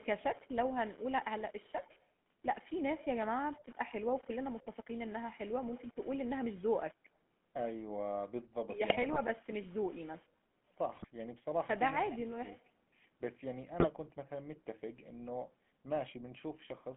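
From start to finish the speech carries the sound of the GSM full-rate codec. The band is confined to roughly 150 Hz to 3.4 kHz, and the voice has a clearly audible buzzy, gravelly texture. It comes from the codec rebuilding the vocal tract as a filter driven by a coarse, regularly spaced pulse excitation that keeps only a fraction of the detail. The character fits a 13 kbps full-rate stream.

GSM bit errors break through three times: from 8.9 to 9.21 s, from 10.94 to 11.07 s, and from 13.79 to 13.9 s. Corrupted bits reached the decoder, so the filter, pitch or gain values for the affected frames were wrong, and the voice turns briefly into squawks, pops and gargling. The middle burst has the highest error rate, about 3 percent over those few frames.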